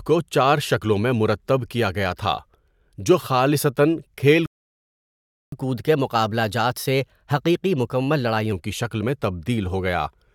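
At 4.46 s the speech just stops dead for about 1.06 s. That's a playback stall, likely the player starving for data or getting blocked. Right after, from 5.52 to 8.52 s, you get catch-up at higher speed: the backlog plays at 1.1x, pitch up about a semitone and a half, then settles back.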